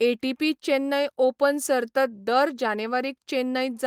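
No technical faults can be heard in this recording.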